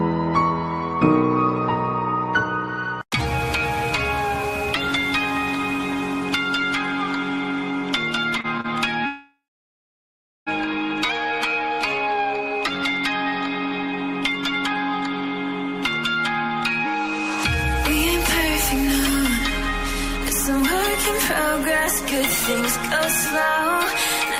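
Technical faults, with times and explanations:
8.37–8.66 s, repeated stalls (stutter): the sound catches and drags through four short gaps, longest 34 ms, each patched by extending the last sound because the jitter buffer kept running dry.
9.06–10.49 s, call audio freeze: the last sound carries on briefly and fades, then falls silent for about 1.1 s before resuming where it stopped, likely packets held up in transit emptying the jitter buffer.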